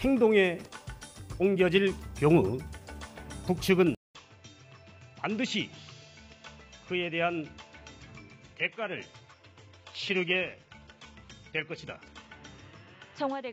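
At 3.95 s the sound cuts out for about 200 ms, then returns a few decibels quieter and duller. From there to the end of the clip nothing is present above about 7.6 kHz, and a new, faint noise floor sits roughly 50 dB below the signal. The narrower band, the level drop and the changed background together point to the input switched to a poorer device, likely a different microphone or a headset's call profile, with the gap marking the handover.

From 8.32 s to 12.32 s, layered on top of that, the quality falls again with no gap. The remaining treble turns thin and synthetic, with swirly codec artefacts. Then it recovers just as abruptly. This is an adaptive stream at a lower bitrate. The sound fits a move from a mid-rate AAC version to a low-rate HE-AAC one, which rebuilds the highs from a sparse description and so sounds artificial.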